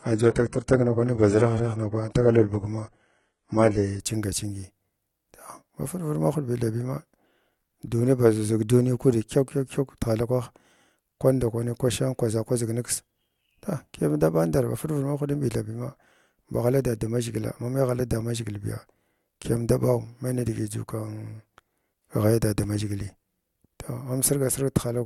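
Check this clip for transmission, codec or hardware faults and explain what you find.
One fault is present: an adaptive stream starting at a low bitrate, from 0.0 to 4.0 s. The player opened on a lean rendition to begin quickly, then stepped up once it had measured the connection. For those first seconds the speech sounds dull and watery, with synthetic-sounding treble, which fits HE-AAC at about 12 kbit/s. At 4.0 s clarity jumps abruptly, consistent with AAC-LC near 96 kbit/s. A spectrogram shows smeared, patchy upper bands with nothing above 11 kHz, while the waveform runs on without a gap.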